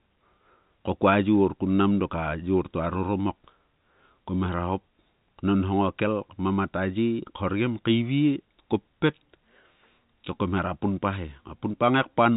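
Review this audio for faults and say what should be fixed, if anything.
Nothing here needs fixing: the speech comes across as ordinary telephone-band audio with no faults to address.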